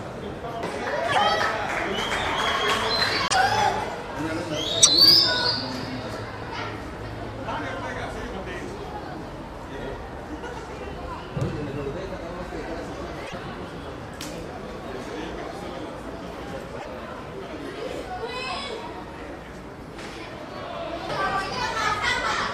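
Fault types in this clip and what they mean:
Broken MP3 bit reservoir: five brief glitches, each about 70 ms or three 26.1 ms frames, likely from frames missing their borrowed reservoir data after a cut.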